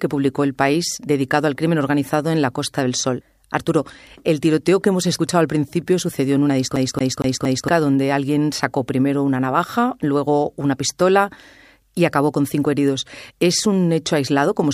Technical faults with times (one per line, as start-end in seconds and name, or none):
6.76-7.68 CD stuck on one turn